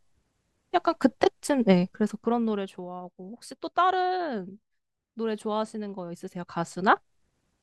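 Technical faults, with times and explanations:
1.88–2.88 s and 6.04–7.36 s, zipper noise: the speech level drops by about 15 dB in the first span and climbs back by about 15 dB in the second, but in small discrete steps of around 1 dB in the first span and well under 1 dB in the second, roughly thirty times a second, instead of a continuous ramp. Each unsmoothed jump in gain puts a tiny discontinuity into the waveform, so the fades carry a fine ticking, zipping texture that lasts only while the level is moving.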